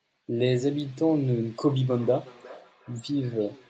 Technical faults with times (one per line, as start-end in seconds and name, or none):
1.99-3.69 feedback echo between two devices